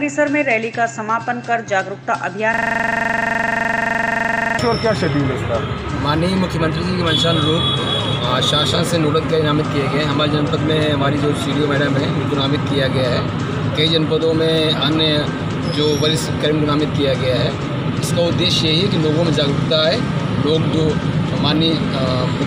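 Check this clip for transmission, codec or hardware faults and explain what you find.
There is one hardware-side fault, a system hang loop, from 2.54 to 4.59 s. A single 42.67 ms slice of sound repeats exactly 48 times, giving a rough, machine-gun-like stutter at 23.4 Hz. The machine or its driver stalled while the sound hardware kept replaying the same ring buffer, which fits a 2048-sample buffer. Packet-loss concealment would fade or vary the repeated audio, but here each repeat is identical and the level never decays.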